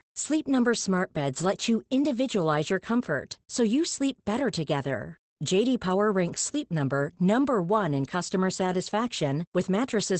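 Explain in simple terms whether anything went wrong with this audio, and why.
The whole recording carries plainly audible Opus voice compression damage from start to finish. Nothing above about 8.7 kHz survives, so the speech sounds muffled, and the coarse coding adds a hoarse, slightly robotic edge. A simple filter would only muffle the sound, but this rough, grainy texture points to a voice codec.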